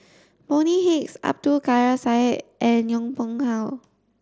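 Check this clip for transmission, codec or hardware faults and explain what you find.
No fault found; the speech carries the expected character of the Bluetooth mSBC headset codec, band-limited at 8 kHz with a faint grain on the louder passages.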